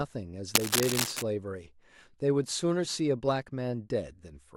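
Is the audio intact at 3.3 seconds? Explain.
Yes, at 3.3 seconds the speech runs through cleanly, with no dropout, click, distortion or other fault to be heard at that moment.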